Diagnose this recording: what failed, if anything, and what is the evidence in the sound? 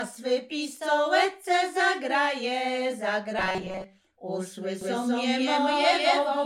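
From 3.39 to 3.84 s the sound collapses into robotic sound from repeated short buffers: a rigid, metallic buzz locked at 188 Hz, which points to a fragment of about 5.3 ms being replayed in place of new audio over most of that stretch. The likely stage is the driver or buffer layer, with an underrun filling gaps by looping the last block. Unlike codec warble, the pitch is fixed rather than following the material.

From 4.81 s to the end, a doubled audio track appears: a full-band copy at roughly equal level trails the original by about a fifth of a second. It starts abruptly, with no build-up, and each repeat is as bright and dry as the source. That rules out acoustic echo or reverb, which would decay and take on room colour. A second capture path or an edit leaving two misaligned copies is the stage this points to.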